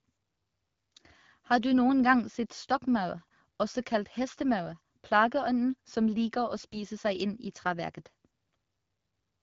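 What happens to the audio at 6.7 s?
From 6.56 to 6.77 s, AMR bit errors: flipped low-priority bits in the AMR-WB frames misplace excitation pulses and skew fine pitch, gain and spectral values, so the sound turns hoarse and gargly. Unlike packet loss, there is no gap or muffled fill; pitch and level roughly hold.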